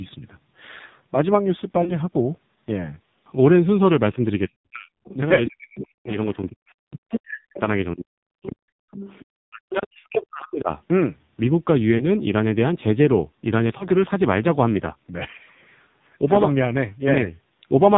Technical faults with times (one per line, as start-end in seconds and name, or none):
0.00-17.98 AMR narrowband mobile codec
1.84-1.93 lost AMR speech frames
4.47-8.89 speech suppressed in double talk
5.04-5.15 other side's voice leaking through
5.79-6.37 other side's voice leaking through
7.09-7.16 other side's voice leaking through
8.42-9.25 other side's voice leaking through
9.47-10.70 speech suppressed in double talk
10.00-10.07 lost AMR speech frames
11.98-12.05 lost AMR speech frames
13.78-13.88 lost AMR speech frames